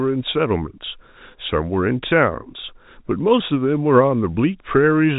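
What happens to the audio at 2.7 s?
Nothing goes wrong at 2.7 s: the speech carries on intact through that moment, with only the narrow, telephone-band character of G.711 telephone coding, which cuts everything above roughly 3.8 kHz.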